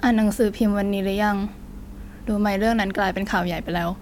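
Nothing stood out as a technical problem on listening to this speech recording.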